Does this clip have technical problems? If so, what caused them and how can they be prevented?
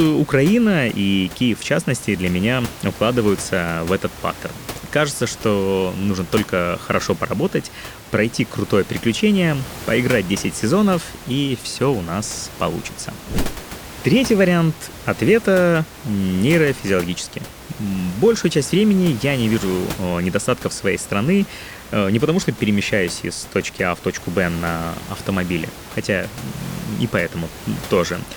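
No, the speech has no technical faults, so there is nothing to trace or prevent.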